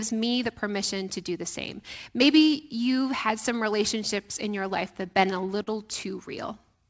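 From 4.80 to 5.69 s, just after "some relationships in your", the speech shows repeated stalls (stutter): five brief hitches where delivery ran dry and the last sound was stretched to fill about 79 ms, the longest 42 ms. Unlike packet-loss dropouts, nothing is missing; the speech merely drags.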